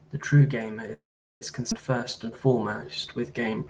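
At 0.93 s the speech stops and the last sound carries on briefly as a fading buzz or hiss before going silent for about 400 ms. It resumes at 1.43 s where it left off. This is a call audio freeze, likely from packets held up in transit until the jitter buffer ran dry, which inserted a gap of roughly 476 ms.

At 1.71 to 1.73 s a skip ahead occurs. Something like a fifth of a second of speech is dropped, and the two sides are joined with almost no gap, so the audio jumps abruptly forward. Later audio was already queued when that stretch was lost or discarded.

From 1.98 s to the end, a jitter buffer slow-down stretches the speech to 89% speed at unchanged pitch, adding 198 ms. The receiver repeats individual pitch periods and pause fragments to rebuild its reserve, which leaves the sounds drawn out.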